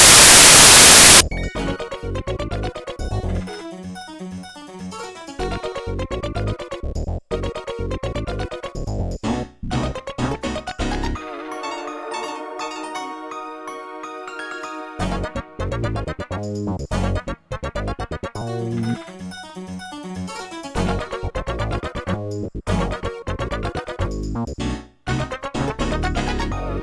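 From 0.00 to 1.21 s the clip opens with file tags played as audio: an embedded cover picture, stored as compressed image data, is decoded as if it were samples. Its near-random bytes produce a very loud white-noise burst that starts and stops abruptly.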